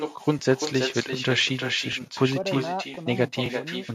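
A speech recording with two faults. The first is echo with no canceller, present the whole way through. Every phrase returns roughly 300 ms later as a fainter, thinner copy, about 7 dB below the direct speech. The far end is playing the call through a loudspeaker. Its microphone captures that playback and sends it back, and nothing strips it out. The second fault is overlapping chunks. Short clicks or stutters land at 0.39, 0.90, 1.41, 1.93, 2.44, 2.95 and 3.46 s. The spacing is steady, just over half a second. The audio was handled in 0.5 s blocks, and each block began slightly before the previous one ended. So 12 ms of sound is played twice at every join, which creates the regular tick.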